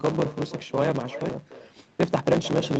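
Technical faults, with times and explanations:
Throughout: block size mismatch (truncated). Block ends are discarded, giving a 109 Hz buzz and speech running 1.16 times fast at near-normal pitch, unlike a resampling error.
Throughout: echo with no canceller. A quieter, thinner copy trails the talker by roughly a third of a second, about 14 dB down, distinct from room reverberation.
1.29 s: skip ahead. Around half a second of speech is missing and the two sides join directly with no fill, unlike a dropout that leaves silence.
1.39 to 2.76 s: jitter buffer speed-up. Repeated removal of pitch periods drops roughly 150 ms, so speech hurries along at 109 percent with pitch unchanged.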